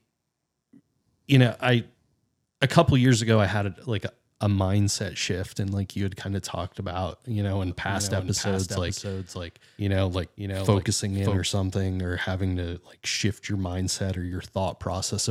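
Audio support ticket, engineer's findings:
Doubled audio track, 7.7 s to 11.4 s. Speech heard twice, the second copy trailing by about half a second, roughly 5 dB down. Dry, full-band echo, no room tail, and it switches in and out abruptly at both ends. Likely a second capture path or an edit layering two out-of-step copies. Worth checking routing and any monitor or loopback feeds for that stretch.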